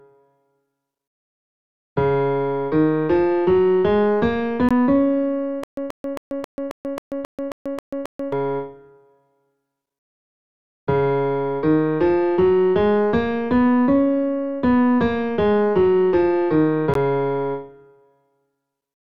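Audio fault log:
4.69 s and 16.94 s, Bluetooth stall: the sound drops to silence for a very brief moment, 18 ms at the first point and 15 ms at the second, then carries on as if nothing had happened. Gaps this short with a clean restart fit a wireless link that likely lost a few packets to interference, so the headphones' small buffer ran empty and playback paused until the retransmitted data arrived.
5.64 to 8.33 s, stutter with silent gaps: a fragment of about 131 ms plays, falls to dead digital silence for about 138 ms, then the same fragment plays again, repeating ten times at a steady 269 ms rhythm before normal playback returns. That even repeat-and-gap pattern points to a stalled player or stream that likely kept retrying, replaying its last buffered piece each time and then running dry. Whatever should have sounded in that stretch is missing.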